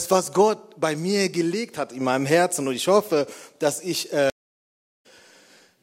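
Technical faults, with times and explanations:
4.30–5.06 s, stream reconnect: the connection dropped, giving 0.72 s of silence, then a fresh decoder picked up the stream roughly 0.4 s further on, skipping that stretch.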